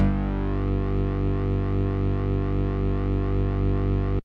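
No technical faults are audible anywhere in the audio.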